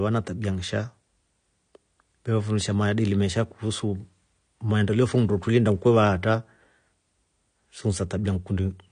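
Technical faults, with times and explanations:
Throughout, AAC compression: the speech has likely been through a low-bitrate AAC-LC encoder, and the damage fits a rate of around 32 kbps. Short of bits, the encoder drops everything above about 9.7 kHz and coarsely quantises the remaining frequency lines against its hearing model. The result is plainly audible: the speech sounds dull and smeared, with a warbling, fizzy texture on sustained vowels and sibilants.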